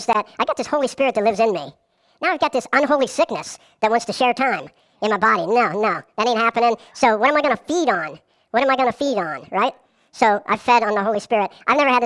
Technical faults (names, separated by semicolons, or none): wrong sample rate